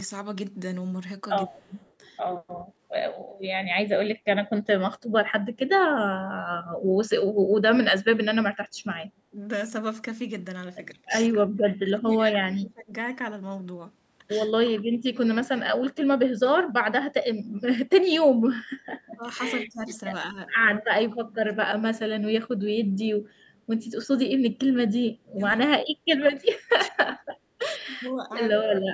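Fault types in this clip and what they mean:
Echo leak: a faint copy of the speech returns 166 ms late, about 40 dB down, likely uncancelled loudspeaker pickup, seen as trailing ghost harmonics.
Speech suppressed in double talk: speech dips by about 15 to 30 dB at seven points, likely echo-canceller ducking during overlap, seen as notches in the waveform.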